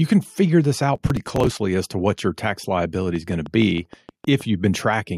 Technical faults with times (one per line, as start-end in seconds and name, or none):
0.95-1.59 processor overload crackle
3.16-4.42 train of clicks